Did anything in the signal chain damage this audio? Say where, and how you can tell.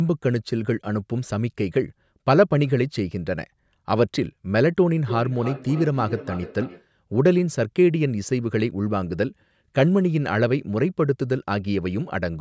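Yes. From 5.0 to 6.88 s a feedback echo between two devices in the call path returns the speech roughly every third of a second, peaking about 13 dB below it. A second device replays this microphone's signal, and the echo canceller ignores sound it didn't play. A spectrogram shows faint, evenly spaced copies trailing each syllable, with nothing above 8 kHz.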